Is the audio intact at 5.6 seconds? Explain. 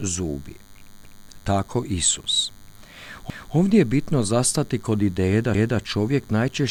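No, 5.6 s falls inside a stutter from 5.55 to 5.8 s, right after "zastati kod ideje da". These are overlapping chunks: a new block of audio starts before the previous one finished, so about 250 ms gets played twice. It points to processing in blocks of roughly 2 s.

Under that there's also the DECT cordless phone buzz: a nearby handset or base station bursts every 10 ms, and the audio circuit rectifies those bursts into a thin 100 Hz buzz full of harmonics, sitting roughly 35 dB below the speech.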